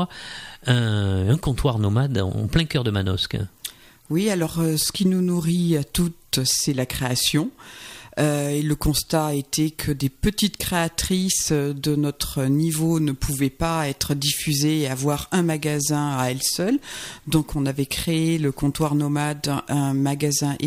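No technical faults can be heard anywhere in this clip.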